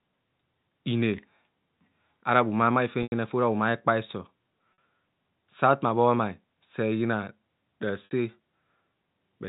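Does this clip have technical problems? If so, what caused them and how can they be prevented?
Yes. Packet loss with pitch repetition: audio packets were lost at 3.03 s (90 ms, between "ara bhumamai" and "fe ora"), 4.73 s (50 ms) and 8.05 s (60 ms). The receiver bridged each gap by looping the last pitch period, producing a brief held, buzzy tone that fades out over about 50 ms, so the longer gaps at 3.03 s and 8.05 s fall briefly silent before speech returns with a short cross-fade. Forward error correction or redundant packets on the link would prevent this.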